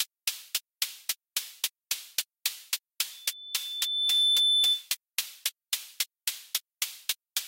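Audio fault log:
3.11–4.90 s, loudspeaker feedback squeal: a pure tone at 3.5 kHz rises out of the sound over roughly a second and settles about 10 dB above it, continuing until 4.90 s. A microphone was hearing the loudspeaker it drives, and at 3.5 kHz the loop gain went past unity, so that frequency kept feeding itself. A spectrogram shows one bright horizontal line at 3.5 kHz that brightens, then holds. The waveform envelope swells, then stays high.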